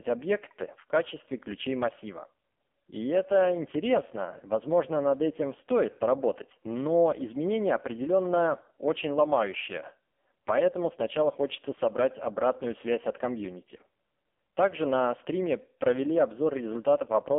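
Thin, boxy speech with a buzzy, synthetic edge runs through the whole clip, and nothing reaches past about 3.5 kHz, with the low end also trimmed below roughly 250 Hz. This is the AMR narrowband mobile codec, AMR-NB, rebuilding the voice from a coarse vocal-tract model and a few excitation pulses per frame. The damage is heavy, and the harsh, robotic texture fits one of its lowest bitrate modes, around 5 kbps.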